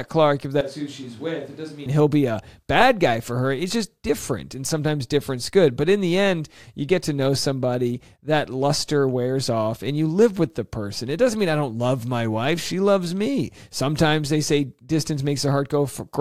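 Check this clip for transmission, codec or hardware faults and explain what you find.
One fault stands out: a switch to a distant microphone from 0.61 to 1.86 s. The speech abruptly turns hollow and roomy, loses bass and drops about 10 dB, with room noise only about 25 dB below it, likely because the close microphone's signal failed and a farther one took over. A waveform shows the envelope shrinking suddenly and snapping back, and a spectrogram shows weaker low frequencies, smeared reverberant tails and a raised noise floor.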